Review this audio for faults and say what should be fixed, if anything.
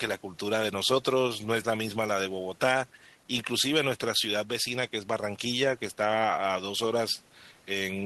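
No faults can be heard anywhere in this speech recording. Nothing needs to be fixed.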